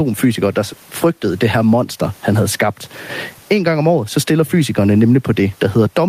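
Speech, with gain pumping throughout: the gain swings by roughly 15 dB, and the room noise sits about 42 dB below the speech. The likely cause is excessive microphone gain held back by a fast limiter.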